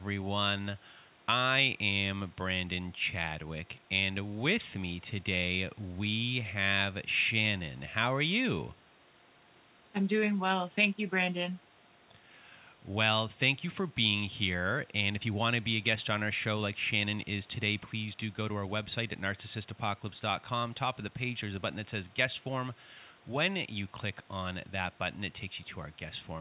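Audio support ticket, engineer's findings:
No faults found in this speech clip. The call path through the G.711 A-law codec behaves as expected at 64 kbps, with nothing heard above 4 kHz, consistent with narrowband telephone coding.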